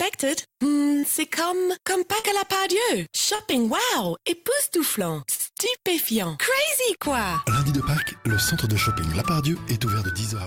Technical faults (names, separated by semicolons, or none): short concealed packet loss